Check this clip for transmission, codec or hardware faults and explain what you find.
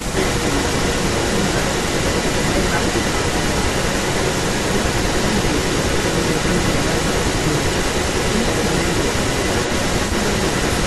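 Two faults are present, both pointing to a loudspeaker-side echo canceller that is not coping.

An echo leak runs through the whole clip: a second copy of the speech trails the original by 390 ms, at about the same level as the direct speech. The likely cause is an echo canceller at the far end that failed to subtract what its microphone caught from its own loudspeaker, so the returned sound is sent back down the line. Because the copy sits a fixed 390 ms behind and is as loud as the original, it reads as a distinct repeat rather than room reverberation, which would smear continuously and decay smoothly instead of arriving as one delayed duplicate.

Speech suppressed in double talk appears from 0.05 to 0.15 s: for about 100 ms the speech ducks sharply, dropping by about 15 dB at its deepest before recovering. This fits an echo canceller that heard both sides at once, could not separate the local talker from its loudspeaker echo, and pulled the level down on both. 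Unlike a network dropout, the sound sinks under gain control rather than being lost in transit.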